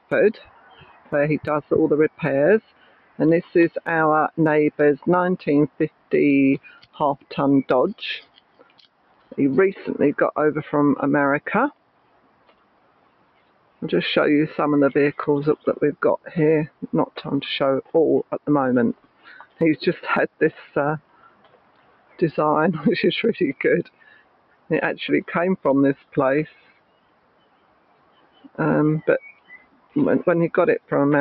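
A speech-style noise suppressor is left running on non-speech sound for the whole clip. It keeps treating steady material as noise, so the level swings by around 20 dB, with attacks getting through and sustained parts pumping and thinning. Sound is cut by the noise suppressor from 0.0 to 9.37 s, 11.71 to 13.82 s, 15.56 to 22.21 s and 23.85 to 30.91 s. Held and decaying parts drop by up to about 16 dB for a few seconds in each stretch, so their tails cut off early.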